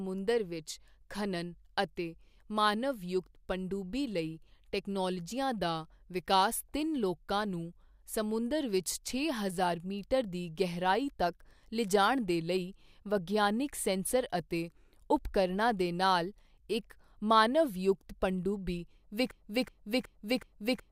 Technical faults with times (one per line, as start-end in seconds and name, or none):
19.31-20.91 broken-record loop